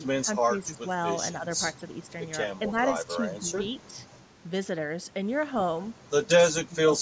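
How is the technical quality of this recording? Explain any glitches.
The speech has five short dips in level, at 0.05–0.8 s, 1.33–1.46 s, 2.59–2.76 s, 3.19–3.59 s and 6.6–6.91 s. The deepest are about 15 dB in the first and about 20 dB in the last, and the middle three are about 5 dB. The likely cause is speech suppressed in double talk: an echo canceller mistook this talker for loudspeaker echo and turned the voice down.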